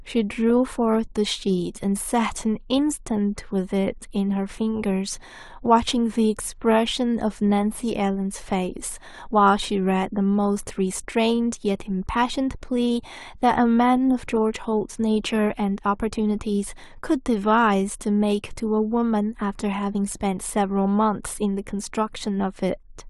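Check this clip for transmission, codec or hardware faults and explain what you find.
Nothing turned up here: I listened through the speech for transmission, codec and hardware trouble and didn't hear a single fault worth flagging.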